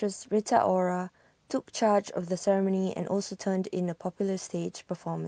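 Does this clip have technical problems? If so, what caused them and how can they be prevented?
No, no technical faults heard.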